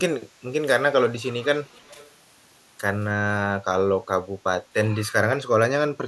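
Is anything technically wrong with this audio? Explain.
Yes. Echo leak, 1.66 to 2.11 s: a faint copy of the speech returns about 320 ms late, very quiet beneath it, likely a loudspeaker pickup the far end's echo canceller missed.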